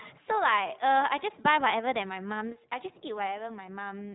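Speech passed through the iLBC codec: plainly rough and synthetic, with a spectrogram empty above 3.9 kHz and a grain that fits independently coded 20 ms frames at 15.2 kbps.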